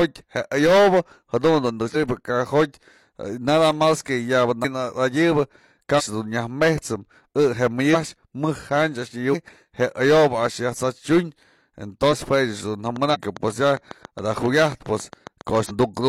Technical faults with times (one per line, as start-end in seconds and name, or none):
1.91-1.96 compressed frames skipped
4.60-4.65 compressed frames skipped
5.95-6.02 compressed frames skipped
7.90-7.96 compressed frames skipped
9.29-9.35 compressed frames skipped
12.08-12.14 compressed frames skipped
12.96-15.98 train of clicks
13.10-13.16 compressed frames skipped
15.65-15.71 compressed frames skipped